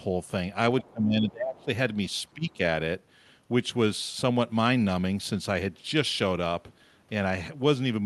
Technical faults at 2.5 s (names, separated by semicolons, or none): speech suppressed in double talk